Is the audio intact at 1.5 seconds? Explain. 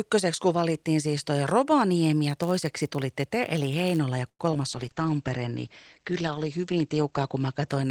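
Yes, the audio is intact at 1.5 seconds, with no fault audible at that moment.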